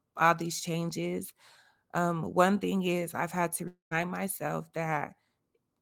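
From 3.67 to 3.93 s the speech breaks off in what sounds like a long network dropout. The last sound is carried on as a buzz or hiss that fades away, then about 110 ms of near silence follows. When the speech returns, 240 ms of it is simply gone rather than delayed, likely because the packets never arrived. That lost stretch, and the decay into silence, set it apart from a short packet-loss glitch, which concealment would bridge almost seamlessly.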